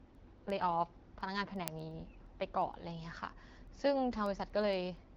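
From 0.15 s right through to about 5.09 s there's a steady run of word clock ticks, roughly ten a second, so around forty across the speech. The receiving end is clearly running on its own clock rather than locking to the sender. They drift apart by something like 200 ppm, and at each slip a single sample gets dropped or doubled, which you hear as a sharp click. All this sits on top of a band-limited AMR-WB signal with nothing above 7.6 kHz, which fits a 12.65 kbit/s setting.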